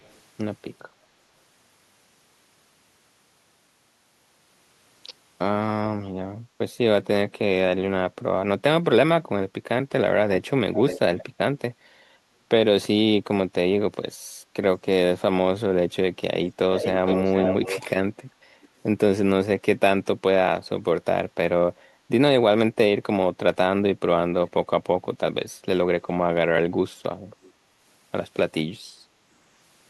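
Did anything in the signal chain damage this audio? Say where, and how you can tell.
Yes. The speech carries a delayed, ghostly copy of itself, an echo leak, at 0.03–0.19, 10.73–10.99, 11.18–11.24, 16.43–16.53, 16.74–17.88, 18.62–18.68 and 27.42–27.52 s. It trails by roughly 405 to 513 ms. It is barely audible at the start and near 18.6 and 27.4 s, but close to full loudness across 16.74–17.88 s. The stage is call processing, likely a far-end loudspeaker's echo canceller letting the microphone's pickup through and returning it down the line.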